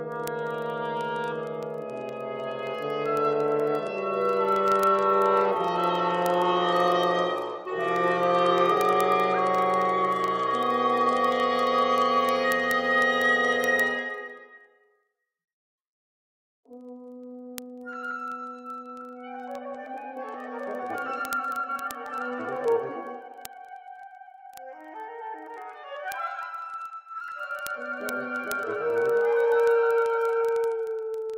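From 0.12 s to the end, word clock ticks sound about every 0.04 s. An unlocked digital link slips one sample each time, which suggests a clock mismatch of roughly 500 ppm.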